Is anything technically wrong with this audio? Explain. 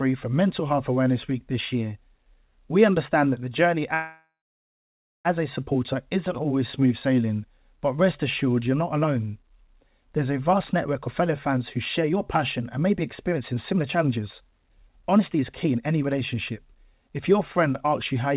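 Yes, there are two faults in this speech.

From 3.94 to 5.27 s there is a call audio freeze. Delayed packets likely emptied the jitter buffer, so the receiver stretched the last sound into a fading buzz or hiss, then about 0.94 s of silence. Speech resumes where it stopped, so nothing is lost but about 1.31 s of delay is added.

From 10.53 to 17.93 s a jitter buffer speed-up plays the speech at about 118% speed. The buffer repeatedly cuts out short pitch-period segments, about 1.5 s in total, to remove the extra delay. The pitch stays the same, but the speech sounds hurried. The G.711 A-law path limits the band to 4 kHz throughout.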